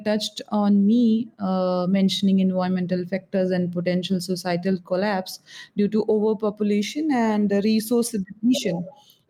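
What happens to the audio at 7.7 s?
At 7.7 s the speech is affected by gain pumping, present throughout the clip. The gain is pulled down on each loud sound, swinging by around 5 dB, which likely comes from excessive input gain driving a fast limiter that squashes the dynamics.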